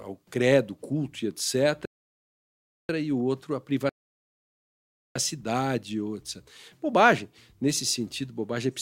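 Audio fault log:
1.85–2.89 s and 3.89–5.15 s, rebuffering stall: the player twice drained its store of downloaded audio and halted until more data arrived. The speech drops to silence after "ao credo culto e" and picks up again at "e o outro a", then stops a second time just after "e o outro a". Each time it resumes exactly where it left off, so nothing is lost, but the pauses add 1.04 s and 1.26 s of dead air.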